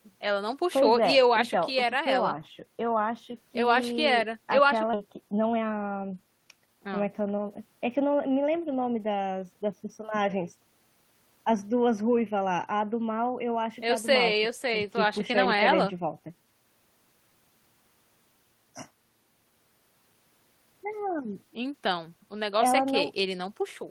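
At 4.93 s the speech skips ahead: roughly 0.7 s of audio never plays, and nothing fills the space, so the sound on either side of the missing stretch is butted together with no gap. That stretch was dropped, either on the way or by the jitter buffer when it overflowed, while later audio was already waiting. The jump cuts the latency by about the same 0.7 s.

From 5.05 to 6.68 s a jitter buffer speed-up follows. The receiver is still holding more audio than it targets, so it repeatedly removes pitch-period-sized pieces, about 0.3 s in total across the stretch. Playback runs at about 120% speed with the pitch unchanged, and the speech sounds hurried until normal timing returns.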